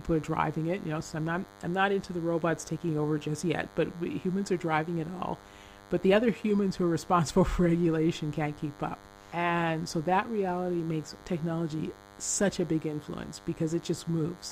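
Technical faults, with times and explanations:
Throughout: DECT cordless phone buzz. A nearby DECT handset or base transmits a radio burst 100 times a second, which the audio circuitry rectifies into a thin, steady 100 Hz buzz rich in harmonics, sitting roughly 25 dB below the speech.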